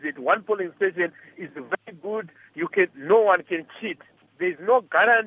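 No technical faults can be heard anywhere in the clip, and the signal holds steady throughout.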